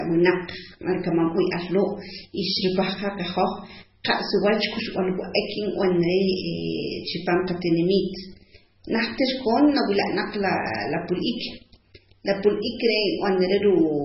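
From start to finish the speech has nothing above 5.6 kHz and is heavily damaged by what is likely MP3 compression, at a very low bitrate that fits about 16 kbps. With bits that scarce, the encoder drops the treble and lets weak frequency bands flicker on and off between frames, giving a watery, swirling texture, chirpy s sounds and smeared consonant attacks. That flicker is what separates it from a simple low-pass filter, which would only dull the top.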